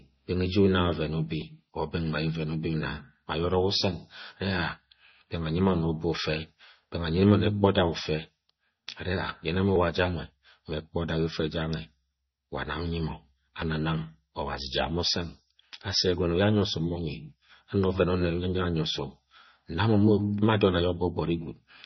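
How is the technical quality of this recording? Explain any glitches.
Not great, honestly. The speech has heavy codec damage for the whole clip, and it's most likely MP3 compression at a low bitrate, which fits something around 24 kbps. With that few bits, the encoder throws away weaker frequency components, and they flicker in and out between frames, giving the voice a watery, swirly texture and smeared attacks. There's also nothing above about 5.9 kHz, so the top end sounds dull and closed in.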